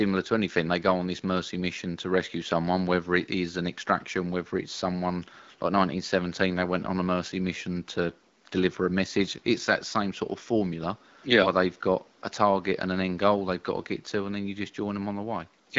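Nothing here goes wrong technically: the speech comes over an HD Voice (AMR-WB) connection at 12.65 kbit/s, with only faint room noise sitting about 35 dB below it.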